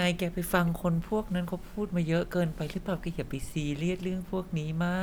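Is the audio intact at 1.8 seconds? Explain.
Yes, at 1.8 seconds the speech plays through cleanly, with no dropout, click or other fault at that point.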